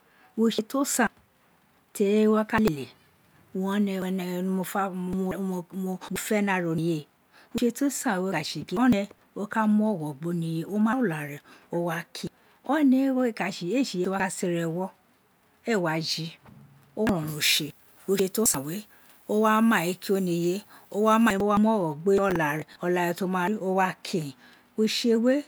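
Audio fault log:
17.28–21.33 s: pre-emphasis left on. An FM 50 µs treble lift was never undone, leaving about 10 dB extra at 10 kHz, so the speech turns thin, bright and sibilant. On a spectrogram, the upper bands glow noticeably brighter for that stretch.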